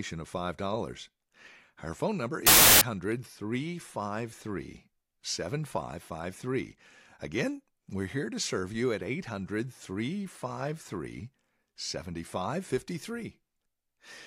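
A speech clip in which, just after "phone number", the audio from 2.47 to 2.81 s turns into loud, harsh broadband noise: samples built from the wrong bytes. For about 0.35 s each value has been assembled with its bytes misordered or offset, so the rapidly changing low bits land in the high positions. On a waveform this shows as a dense block, and on a spectrogram as flat broadband energy covering every frequency.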